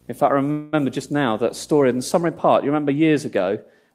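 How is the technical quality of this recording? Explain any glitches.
The recording has two technical faults, both starting in the first half of the clip.

From 0.0 to 2.22 s there is video or display buzz. A screen or video cable is coupling its signal into the audio path. It shows up as a buzz at a 60 Hz field rate, with a fizzy hash riding above it. The interference sits well under the speech, roughly 30 dB down. It stops at 2.22 s.

From 0.51 to 0.75 s there is a call audio freeze. The sound does not drop out. Instead it stretches into a fading buzz or hiss for about 213 ms, with no silent stretch. The likely cause is packets delayed in transit, so the jitter buffer ran dry and the receiver held the last sound. The speech then resumes where it left off. Nothing is lost, but everything after it runs about 213 ms late.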